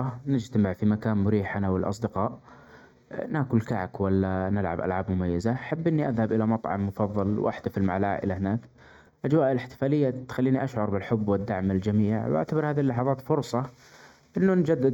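A fraction-of-a-millisecond channel delay (comb filtering) before the mono sum cuts notches from around 3 kHz upward, leaving the speech hollow throughout.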